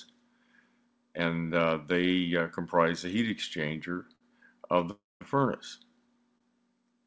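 Twice a packet arrived late and the jitter buffer briefly ran dry, giving a short stall from a late packet: at 4.15 to 4.23 s the last sound is held for about 51 ms, and at 6.38 to 6.42 s for about 26 ms, each with a slight buzz or dip before the audio resumes where it left off, nothing lost. At 4.91 to 5.23 s there is a call audio freeze, likely from packets held up in transit: the sound drags on as a fading buzz or hiss, then about 190 ms of near silence, adding roughly 0.3 s of gap before playback continues intact. Throughout, the audio carries nothing above 8 kHz, as expected from the wideband call codec it passed through.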